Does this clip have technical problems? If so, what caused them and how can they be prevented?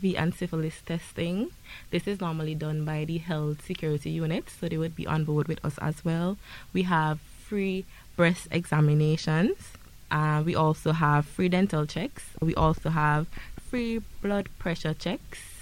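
Yes. A train of clicks runs from 11.98 to 13.99 s: around ten sharp, near-identical pulses at a regular 5 per second, each peaking about as loud as the surrounding sound, so they tick clearly over it. The even spacing and repeated shape point to something injecting pulses into the signal path, likely electrical interference from nearby equipment or a faulty connection or power supply. Keep noisy devices and their cables away from the recording chain and use a stable, properly powered interface.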